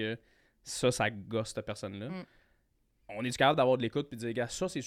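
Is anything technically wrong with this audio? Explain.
No, nothing technically wrong can be heard here.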